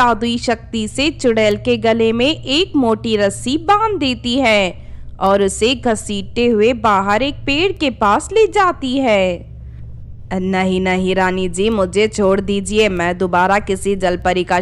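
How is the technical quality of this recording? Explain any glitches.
The technical quality is sound, with no glitches, dropouts or other faults anywhere in the recording.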